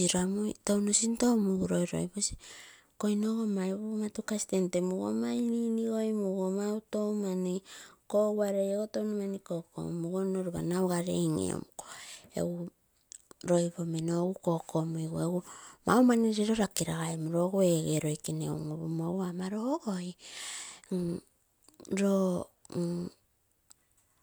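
No technical faults can be heard anywhere in the speech recording. There is no moment in the audio that needs a time or a description.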